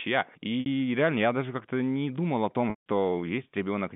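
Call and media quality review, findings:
Packet loss with pitch repetition: 0.60–0.66 s, before "реально я даже", a brief buzzy held tone, consistent with three 20 ms packets. At 2.70–2.83 s, after "не думал о", it fades to silence, fitting eight lost packets. Receiver concealment repeats the last pitch period. Spectrogram: frozen harmonics, then a gap. The band stays within 150 Hz–3.6 kHz on the G.711 A-law path.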